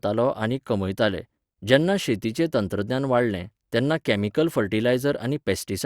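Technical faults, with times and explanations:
No technical faults can be heard in the speech recording, and the signal holds steady and continuous from its opening moment to its close.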